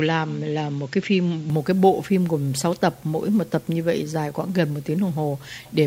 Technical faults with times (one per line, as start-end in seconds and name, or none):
0.00-1.50 input switched to a poorer device